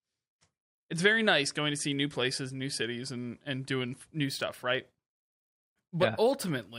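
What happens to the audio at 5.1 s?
At 5.1 s you're inside a stretch of imaging from linear upsampling that runs from about 4.24 s, right after "cities and and doing", to the end. Straight-line interpolation, which fits a 24 to 48 kHz rate change, dulls the top and leaves faint mirrored copies between 12 and 24 kHz, roughly 30 dB down, giving sibilants a light metallic shimmer.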